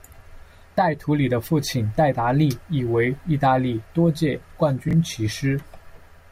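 Chunks out of order at 4.89 to 4.93 s: one block of about 21 ms arrived late and played one chunk after its proper place. No audio is lost, but the swapped order leaves three hard joins, heard as a brief jumbled stutter.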